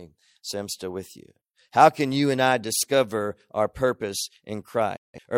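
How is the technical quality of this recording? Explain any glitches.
The recording has one clear glitch near the end: a digital broadcast dropout from 4.96 s to 5.19 s. The receiver stopped getting decodable frames, likely because they were corrupted in transmission and failed their checks, so it muted rather than play damaged data. The speech fades to silence within about 8 ms, stays silent for roughly a fifth of a second, and resumes further along. What was broadcast during the gap, around 170 ms of sound, is gone.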